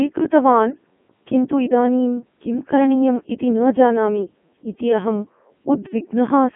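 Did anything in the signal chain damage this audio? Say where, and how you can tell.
Yes. The damage is at the codec stage and runs through the whole clip. The speech sounds robotic and buzzy, with a synthetic sheen, which points to a Codec 2 vocoder. The band is confined to roughly 150 Hz to 3.4 kHz, with nothing above 3.7 kHz, and the heavy degradation fits its top 3.2 kbit/s mode. The decoder rebuilt the speech from sine waves driven by pitch, voicing, energy and envelope parameters, so the original waveform was never carried.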